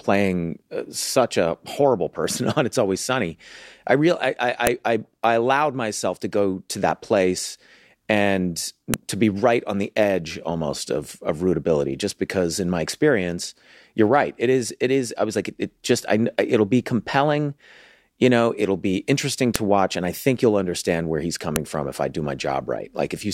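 Sharp, loud clicks cut through the speech at 4.67 s, 8.94 s, 19.56 s and 21.56 s, each a single snap far shorter than any syllable. This is a file header played as audio: separately stored WAV pieces were joined without stripping their headers, so those few dozen bytes of metadata were decoded as samples. Unlike a dropout or a splice glitch, the snap arrives regardless of what the speech is doing and marks where one piece hands over to the next.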